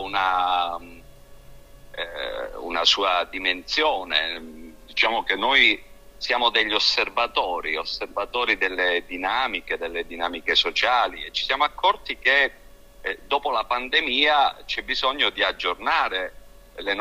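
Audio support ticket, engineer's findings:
Drift correction step, 4.37 to 5.64 s: audio drops about 5.7% in speed and roughly a semitone flat (about 101 cents) for 1.3 s, then snaps back. Likely clock-sync resampler slowing playback in one jump to refill its buffer.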